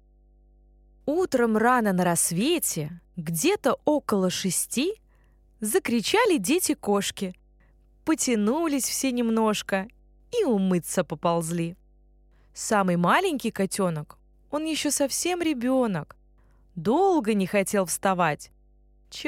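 Mains hum runs under the speech from start to finish. It is a steady low tone at 50 Hz, sitting about 35 dB below the speech. A ground loop or nearby transformer has let the power line leak into the signal path.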